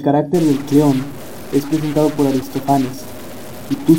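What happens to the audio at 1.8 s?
At 1.8 s the speech carries harsh, buzzy distortion from a stuck bit, running from 0.34 s to the end, likely a data bit frozen in a bad line or converter, offsetting values by roughly -25 dBFS.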